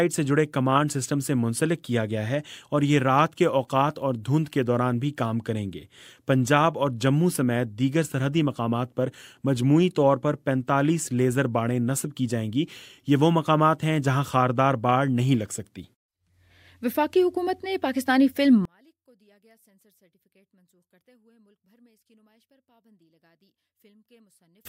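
At 18.65 s the sound drops away almost completely and stays that way until 24.65 s. The level falls by about 38 dB. What remains is faint, a trace of the material. The likely cause is one channel inverted. One side of the stereo pair has its polarity flipped. When the two sides are summed to mono, everything they share cancels. Only the small difference between them survives.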